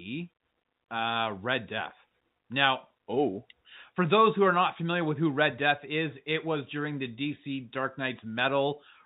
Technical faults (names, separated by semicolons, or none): none